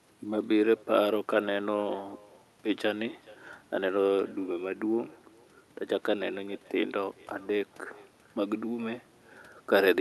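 From start to finish the speech carries an echo with no canceller: the far end's loudspeaker feeds its microphone, returning each phrase roughly 0.4 s later at about 25 dB down. Unlike room reverb, it's a distinct delayed copy rather than a smeared tail.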